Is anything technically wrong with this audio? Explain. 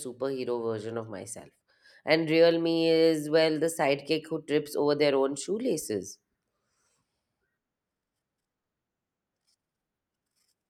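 No, nothing technically wrong turns up anywhere in this recording.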